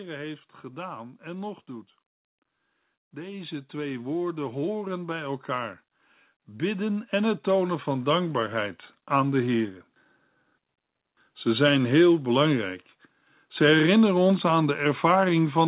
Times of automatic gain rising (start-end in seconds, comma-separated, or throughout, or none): 3.10-9.72